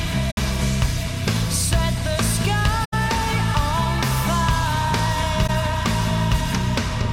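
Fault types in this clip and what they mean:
AAC frame loss with muting: the decoder zeroed the spectrum of lost AAC frames, so the sound fades into three short, soft-edged gaps lasting 21 to 85 ms.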